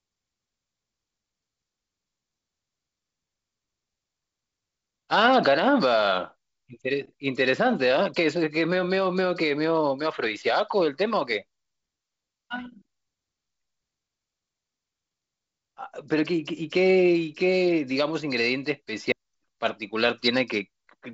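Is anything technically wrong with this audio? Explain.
Yes. At 19.12 s the speech breaks with a brief tick, a dropout of only a few milliseconds, and then picks up from a different point, so the sentence jumps rather than flowing on. This is a CD skip. A knock or a surface flaw threw the player's laser onto another turn of the disc's spiral, so playback muted for an instant and resumed at the wrong place. The sound, which stops at about 7.8 kHz as G.722 wideband coding would, carries that jump through unchanged.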